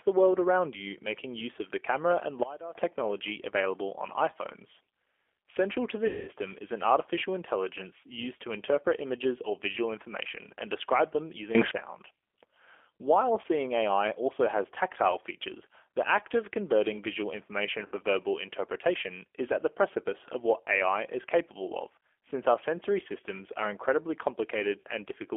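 The whole clip runs through a G.729 codec at 8 kbit/s, band-limited to roughly 300 Hz to 3.4 kHz, so the speech sounds plainly rough, thin and a bit synthetic throughout.

From 6.07 to 6.30 s there's VoIP packet loss concealed by the speech codec. About 200 ms goes missing, which fits ten lost packets. The decoder stretches its last pitch and filter into a fading buzzy tone or coloured noise. Shorter dropouts of the same kind follow at 13.42 to 13.45 s, 17.86 to 17.94 s and 24.80 to 24.85 s, each a brief concealed gap.

Between 11.55 and 11.71 s there's a sudden gain jump of about 20 dB. Speech and background leap together, likely from a gain change applied without a ramp.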